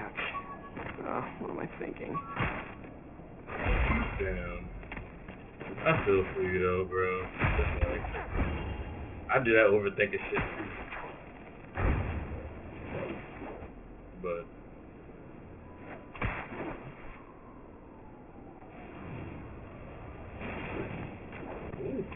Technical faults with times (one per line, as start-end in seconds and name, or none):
0.00-22.15 aliasing